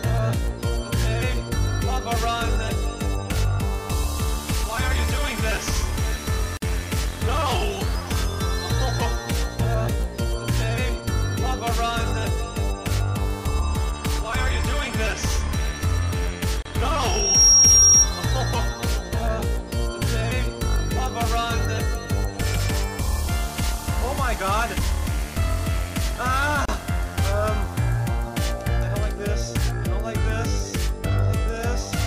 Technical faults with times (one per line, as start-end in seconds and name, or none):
6.57-6.62 gap at a join of encoded pieces
16.62-16.65 gap at a join of encoded pieces
16.96-18.10 loudspeaker feedback squeal
26.65-26.68 gap at a join of encoded pieces